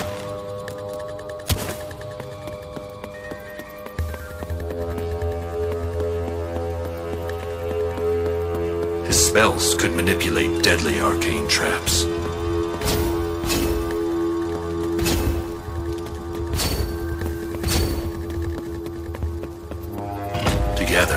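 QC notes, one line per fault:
No faults found in this audio.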